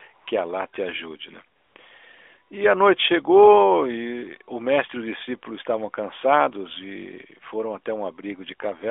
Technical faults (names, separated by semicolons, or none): AMR comfort noise